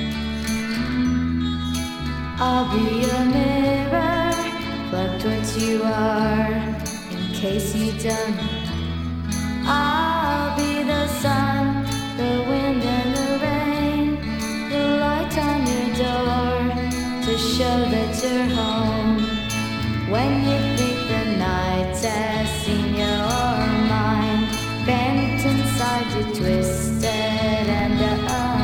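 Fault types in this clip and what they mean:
No technical faults can be heard anywhere in the signal.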